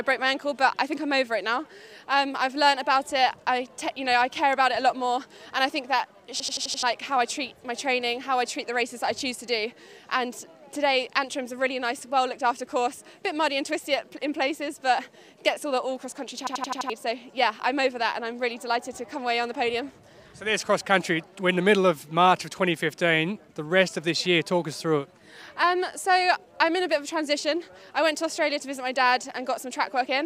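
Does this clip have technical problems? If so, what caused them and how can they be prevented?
Yes. A system hang loop occurs from 6.40 to 6.83 s and again from 16.47 to 16.90 s. Each time, one 85 ms slice repeats exactly five times, a machine-gun stutter at 11.7 Hz, which fits a 4096-sample buffer replayed while the system froze. Nearly half a second of audio is lost each time. Unlike a dropout or packet-loss concealment, the repeats are identical and evenly spaced. Prevent it by fixing the driver or system stall, so playback is never starved.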